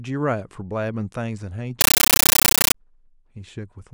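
Speech, where from 1.81 to 2.75 s a compressed stream played as audio replaces it with loud static chattering at 31 Hz, undecoded AC-3 bursts; that steady frame rhythm rules out random noise.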